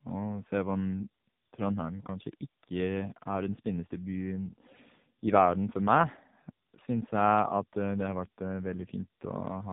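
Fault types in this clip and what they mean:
tandem speech coding: the call passed through an AMR-NB coder at 12.2 kbit/s, a G.711 A-law link, then AMR-NB again at 6.7 kbit/s, each stage recoding the last one's damage. You hear rougher, warbly speech, with nothing above about 3.7 kHz.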